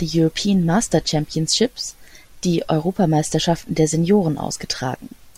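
A short recording of speech, with no technical faults to be heard anywhere in it. Nothing in the audio calls for attention or repair.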